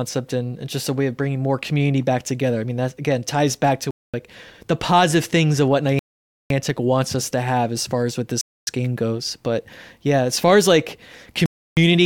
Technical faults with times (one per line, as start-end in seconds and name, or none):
3.91-4.14 Bluetooth stall
5.99-6.50 Bluetooth stall
8.41-8.67 Bluetooth stall
11.46-11.77 Bluetooth stall